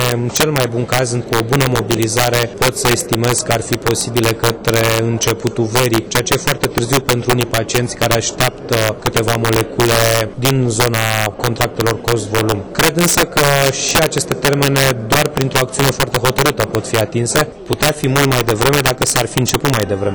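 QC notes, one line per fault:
Throughout: integer overflow. The gain drives peaks about 7 dB past the integer limit, and instead of being held there they wrap to the opposite sign, swinging across the full range. A small share of samples flip this way, giving harsh, violent cracks on the peaks, far sharper than clipping.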